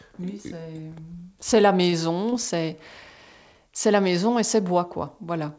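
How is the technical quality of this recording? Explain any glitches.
Two brief network glitches affect the speech, both on a call path whose bandwidth stops at 8 kHz, which fits a wideband call codec such as G.722.

At 1.90 to 1.94 s, just after "c'est la", a short stall from a late packet: the jitter buffer ran dry and the last sound was held for about 23 ms, giving a slight drag. Nothing is lost.

At 2.30 to 2.34 s, again after "c'est la", a short concealed packet loss: about 20 ms never arrived and was synthesized from preceding audio. It is heard as a brief smear.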